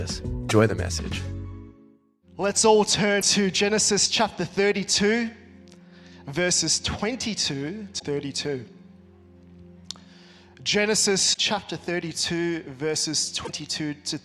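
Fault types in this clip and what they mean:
Damaged data in a compressed stream: corrupted bytes in the encoded stream cause the decoder to misread or discard frames and hunt for the next valid header. The result is five brief glitches, each roughly 55 to 85 ms long, at 0.46, 3.18, 7.96, 11.30 and 13.42 s. On a spectrogram each is a narrow vertical break unrelated to its surroundings. The waveform shows an abrupt discontinuity.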